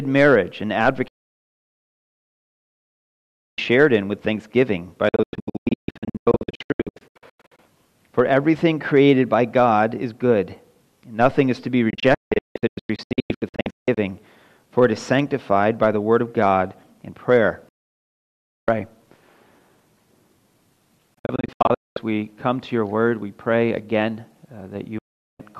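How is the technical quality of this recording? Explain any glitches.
The quality is poor because of repeated digital broadcast dropouts. The receiver lost frames and muted, so the sound cuts out within about 3 ms and then returns with that passage gone. There are solid gaps at 1.08–3.58 s, 17.69–18.68 s and 24.98–25.40 s, and bursts of short holes at 5.09–7.59 s, 11.90–13.98 s and 21.14–21.97 s. On a waveform or spectrogram these show as flat, empty blocks with sharp edges.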